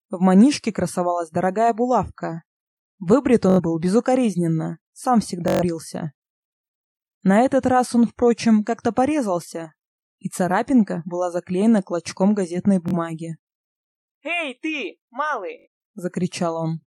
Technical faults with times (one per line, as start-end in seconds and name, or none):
3.50-3.60 Bluetooth stutter
5.48-5.63 Bluetooth stutter
12.88-12.94 Bluetooth stutter
15.59-15.67 Bluetooth stutter